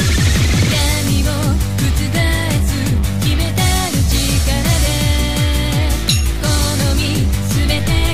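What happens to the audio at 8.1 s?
A DC step is in effect at 8.1 s. It begins at 7.71 s, where the waveform's zero line jumps by about -21 dBFS, and the offset holds to the end of the clip. The jump is heard as a low thump or click, while the sound itself carries on unchanged.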